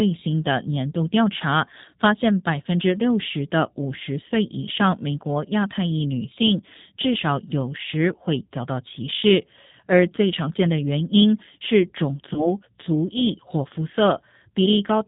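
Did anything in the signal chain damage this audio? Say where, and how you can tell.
Yes. At the codec stage, the whole of the speech has been through the G.729 codec. It is a low-rate model-based coder that rebuilds the voice from a vocal-tract filter, a pitch predictor and a few pulses per frame, rather than sending the waveform itself. The damage is plainly audible throughout. Nothing reaches above 4 kHz, and the voice has a rough, slightly synthetic grain, which fits an 8 kbit/s G.729A stream.

At the network stage, there is VoIP packet loss concealed by the speech codec from 12.34 to 12.52 s. About 20 ms of audio went missing, which points to a single dropped packet. The decoder filled the gap by extending its last pitch and filter settings at falling gain, so the sound smears into a brief, fading stretch of synthetic sound. Because each frame is built on the previous one, the voice stays weakened or distorted well past the 20 ms gap.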